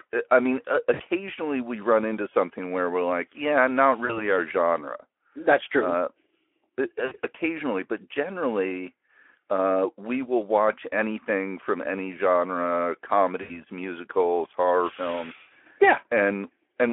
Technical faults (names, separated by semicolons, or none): VoIP packet loss concealed by the speech codec